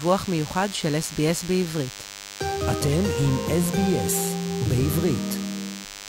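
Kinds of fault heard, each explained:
DECT cordless phone buzz: a nearby DECT handset or base station emits a radio burst every 10 ms, which the audio circuitry rectifies into sound. Here it runs throughout as a thin, steady buzz at 100 Hz, rich in harmonics, sitting roughly 15 dB below the sound.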